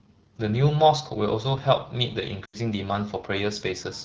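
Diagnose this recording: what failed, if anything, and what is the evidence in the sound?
Codec stage: the whole clip carries AMR wideband (HD Voice) coding at 8.85 kbit/s, giving rough, raspy speech. The spectrogram shows smeared harmonics and shaped noise fill from 6.4 to 7 kHz.

Network stage: lost AMR speech frames at 2.45 to 2.58 s, about 80 ms, fitting four 20 ms frames. The decoder stretched the last good sound with falling gain, so the waveform envelope decays before recovering weakly.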